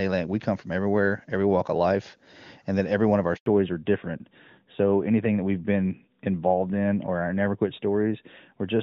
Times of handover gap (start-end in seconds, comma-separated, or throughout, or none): 3.36-3.46